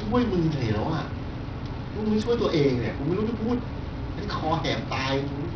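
Bluetooth SBC compression runs throughout the speech, likely from a starved bit pool near 64 kbps, leaving flickering, missing treble, gritty quantisation noise and aliasing.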